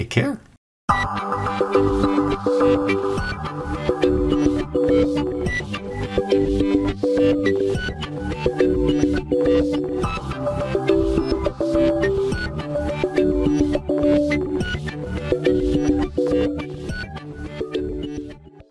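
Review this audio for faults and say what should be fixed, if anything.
No faults turned up in this audio, so there is nothing that needs fixing.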